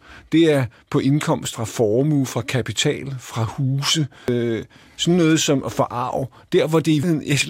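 At 1.53 s (after "er på"), 4.28 s (after "fra kapital fra huse") and 7.03 s, the speech skips about a third of a second: audio missing between chunks, likely lost at 3-second chunk handovers.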